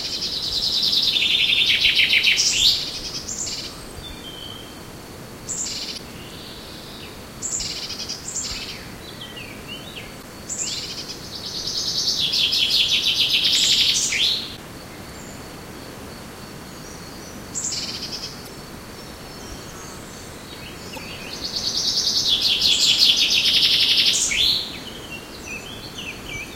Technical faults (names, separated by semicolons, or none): damaged data in a compressed stream